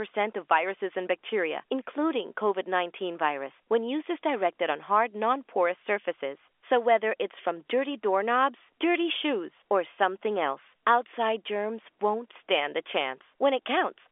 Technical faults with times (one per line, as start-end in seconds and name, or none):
none